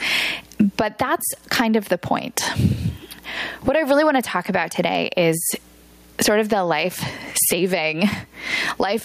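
Gain pumping runs through the whole speech clip. The level swings by around 20 dB. The likely cause is an input gain set far too high and a fast limiter clamping it, leaving the sound squashed.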